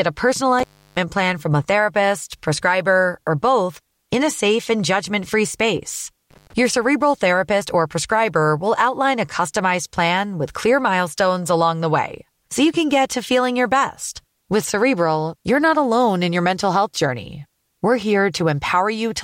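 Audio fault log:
0.59–0.97 s and 6.31–6.53 s, intermittent contact: the speech drops out twice, for about 330 ms and then about 94 ms, with crackle at each break and remake. A loose cable or plug momentarily opens the signal path, leaving faint hiss during each gap.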